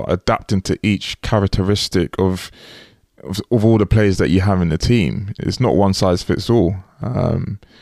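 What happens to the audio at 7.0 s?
A block of digital silence hits at 7.02 s, right after "one size fits all". For about 4.4 ms the samples drop to zero, the kind of gap left when the output buffer isn't filled in time or a calculation yields invalid values that get zeroed. The sound cuts out and returns with no fade, so both edges are abrupt steps. Because the hole is so brief, it comes across as a tick or dip rather than silence.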